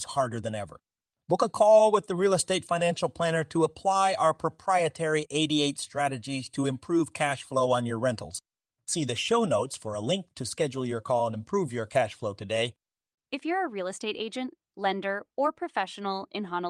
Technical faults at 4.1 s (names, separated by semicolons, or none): none